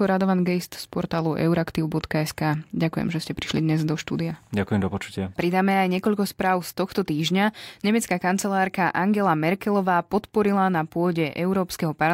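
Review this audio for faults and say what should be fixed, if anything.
Nothing in this recording needs fixing. No technical faults can be heard anywhere in the speech.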